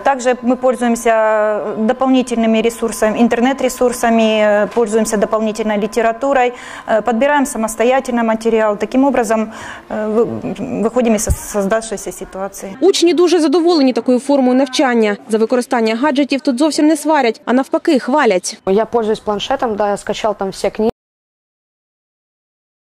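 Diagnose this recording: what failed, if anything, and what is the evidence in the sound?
The input feed was likely lost partway through, through a disconnected device, a failed link or a mute somewhere ahead of the recorder, while the recorder kept writing silence. This is an audio dropout to silence: at 20.9 s the sound stops abruptly mid-flow and never returns, running as silence to the end of the file. The gap holds no room tone or noise floor at all, so whatever was happening after 20.9 s is gone.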